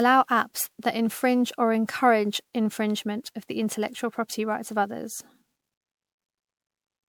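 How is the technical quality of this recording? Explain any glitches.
The recording is degraded from start to finish by generation loss. The speech appears to have been through many rounds of lossy compression, and the damage is present across the whole clip rather than appearing as isolated glitches.

Throughout, the audio was likely decoded and re-encoded as MP3 around ten times, at settings that point to 128 kbit/s. Each pass re-quantises on a shifted frame grid, stacking noise and spectral gaps, so the speech sounds swirly, hollow and smeared, with softened consonant attacks.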